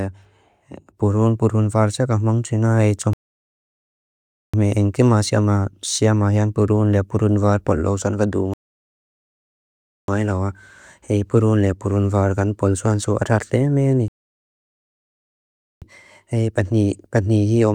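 The speech halts three times in rebuffering stalls. The player runs out of downloaded audio, falls silent, and waits for more data. Each time it picks up exactly where it stopped. Nothing is skipped, but time is added. The first gap runs from 3.13 to 4.54 s, after "ka hamang triná é", and lasts 1.40 s. The second runs from 8.54 to 10.08 s, after "paláu sán va", and lasts 1.55 s. The third runs from 14.08 to 15.82 s and lasts 1.74 s.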